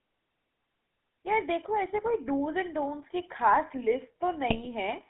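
Throughout, the GSM full-rate codec leaves a buzzy, gravelly roughness on the speech. Its pulse-driven vocal-tract model is consistent with 13 kbps full rate, and the line limits the speech on a spectrogram to a band of roughly 200 Hz to 3.7 kHz. From 4.48 to 4.67 s, GSM bit errors corrupt the decoder's filter, pitch and gain values, producing squawks and gargling pops that appear as sudden amplitude spikes and smeared spectral blotches.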